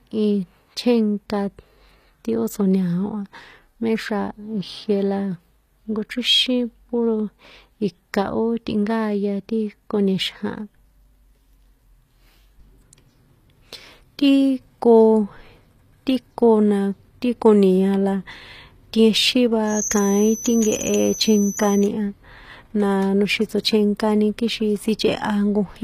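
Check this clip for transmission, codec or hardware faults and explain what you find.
Two faults are audible in this speech clip.

Throughout, there is plainly audible HE-AAC compression damage, likely from a low bitrate around 24 kbps. Copied treble makes sibilants gritty. A spectrogram shows nothing above 14.9 kHz and repeated upper-band patterns.

From 19.65 to 21.91 s, a steady 6.2 kHz tone sits a few dB below the speech, likely a feedback whistle from a near-unstable speaker-to-microphone loop. A spectrogram shows it as a thin horizontal line.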